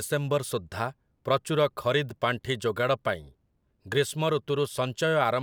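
A recording of speech in which nothing stood out as a technical problem on listening.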